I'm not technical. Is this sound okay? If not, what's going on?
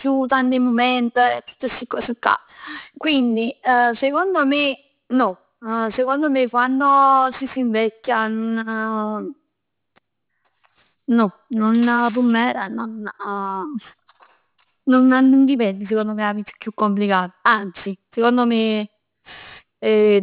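No. Aliasing runs throughout: the quality was lowered without filtering, so sounds above 4 kHz fold back as false, gritty, metallic tones on hissy consonants.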